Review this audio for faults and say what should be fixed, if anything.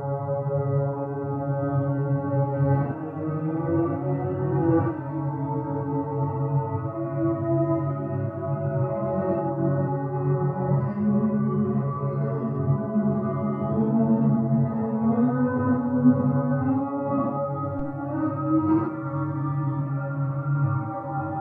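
A phantom power thump at 17.79–17.99 s: the supply step passes through the coupling capacitors as a deep, unpitched thud peaking at about −22 dBFS. It dies away within 45 ms, and the clean exponential decay separates it from a handling bump. Mute the channel, or switch phantom power only while the input is faded down.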